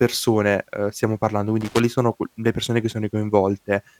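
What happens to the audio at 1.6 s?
At 1.61 s, just after "ehm stiamo parlando", a loose connector crackle breaks out and lasts until 1.84 s, ending before "sono qu le persone". A worn contact is making and breaking, chopping the speech signal into an irregular burst of scratchy crackle.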